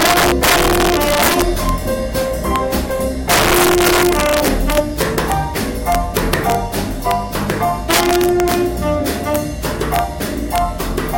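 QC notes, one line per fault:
Throughout: integer overflow. The signal is driven about 5 dB past the largest value the integer format can hold, and nothing limits it. Each peak that crosses the ceiling wraps around to the opposite extreme. Around one percent of samples are affected, so this happens only on the loudest moments. Each wrap is a jump across the full range, heard as a violent crack. These cracks are far harsher than the flattened tops of ordinary clipping.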